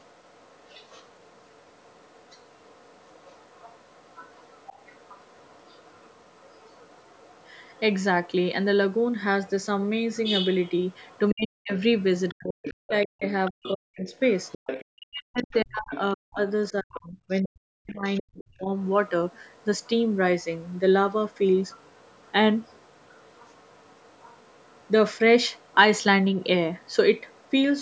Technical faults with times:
0.00-8.03 other side's voice leaking through
9.48-15.99 other side's voice leaking through
11.32-18.69 speech suppressed in double talk
17.87-27.52 other side's voice leaking through

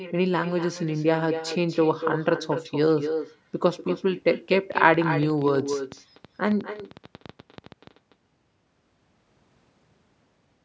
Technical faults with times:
0.00-10.64 echo with no canceller
4.72-7.88 train of clicks

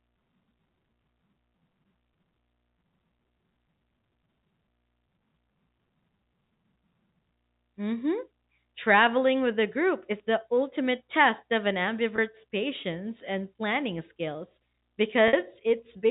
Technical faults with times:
12.16-12.18 packet loss with pitch repetition
15.28-15.33 packet loss with pitch repetition

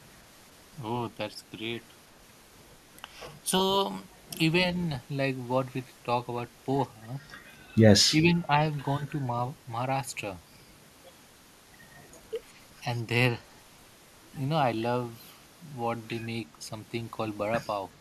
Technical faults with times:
8.22-8.53 speech suppressed in double talk

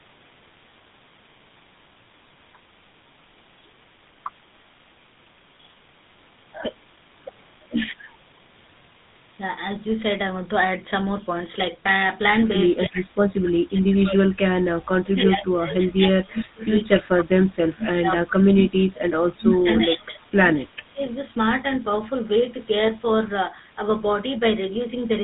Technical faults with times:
0.00-25.23 tandem speech coding
17.17-20.35 speech suppressed in double talk
20.65-21.12 speech suppressed in double talk

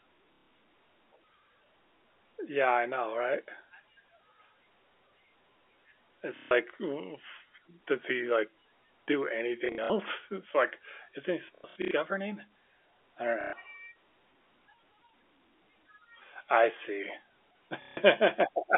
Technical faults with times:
0.33-0.48 packet loss with last packet repeated
6.36-6.51 packet loss with last packet repeated
9.66-9.90 packet loss with last packet repeated
11.55-11.91 packet loss with last packet repeated
13.41-13.53 packet loss with last packet repeated
17.82-17.97 packet loss with last packet repeated

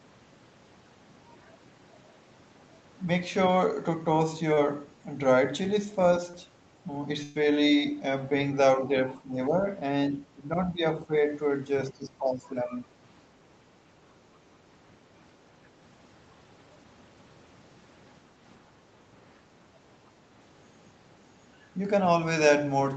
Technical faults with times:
4.53-4.59 short concealed packet loss
6.31-6.35 short concealed packet loss
7.23-7.37 burst of packet loss
9.22-9.64 speech suppressed in double talk
10.13-11.13 speech suppressed in double talk
11.91-12.87 speech suppressed in double talk

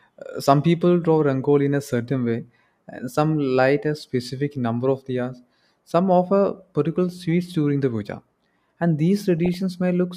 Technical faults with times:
9.38-9.54 DAB burbling

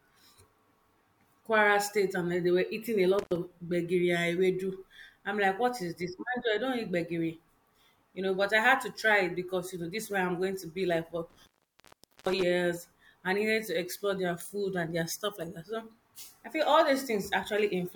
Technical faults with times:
3.19-3.36 intermittent contact
11.30-12.43 intermittent contact

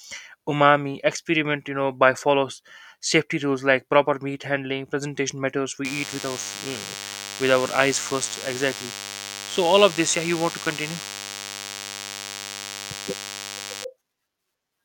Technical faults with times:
5.85-13.85 DECT cordless phone buzz

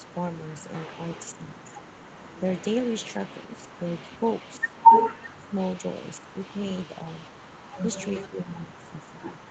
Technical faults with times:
0.03-0.07 echo leak
0.73-9.50 echo leak
1.37-1.64 speech suppressed in double talk
5.26-5.57 speech suppressed in double talk
6.21-6.40 speech suppressed in double talk
7.82-9.14 speech suppressed in double talk

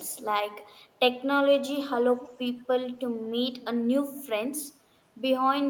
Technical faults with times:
2.19-2.40 echo leak
3.61-3.65 echo leak
4.17-4.22 echo leak

